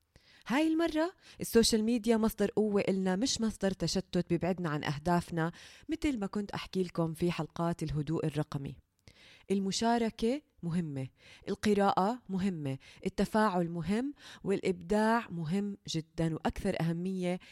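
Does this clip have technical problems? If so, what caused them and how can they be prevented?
No, the speech signal shows no technical faults anywhere in the clip, so there is nothing to trace to a cause or guard against.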